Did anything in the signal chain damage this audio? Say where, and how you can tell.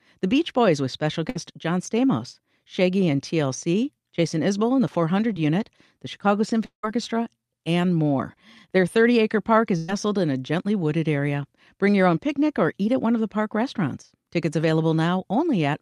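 Yes. Burst of packet loss at the network stage: after "with special", 1.29 to 1.37 s, and after "acre park", 9.77 to 9.90 s, a fading fill covers roughly 60 ms, then 120 ms lost before "in a gently wooded".

Short concealed packet loss, network: at 5.33 to 5.37 s, after "and the", about 20 ms went missing and was patched by extrapolation, heard as a brief smear.

From 6.65 to 6.85 s the sound decays into a fading tail, then silence, before audio resumes with about 180 ms gone, likely a long network dropout.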